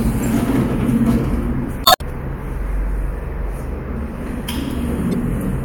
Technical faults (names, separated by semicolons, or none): damaged data in a compressed stream